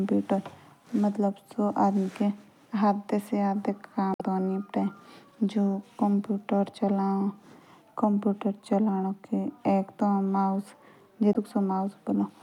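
A brief glitch, heard as a chirp, squawk, click or short hole, breaks the speech at 4.12 to 4.21 s and again at 11.32 to 11.36 s. Both come from damaged data in a compressed stream: corrupted bytes make the decoder misread those frames and lose sync until it finds the next valid header.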